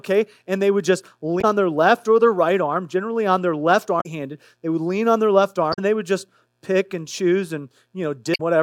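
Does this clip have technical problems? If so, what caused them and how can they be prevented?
Yes. Damaged data in a compressed stream causes brief disruptions at 1.38–1.45 s (after "they would just"), 3.97–4.06 s (after "generally on their left"), 5.70–5.79 s (after "lean on their left") and 8.32–8.41 s. The decoder misreads broken frames and resyncs. Verify stream integrity with checksums or error-correcting transport.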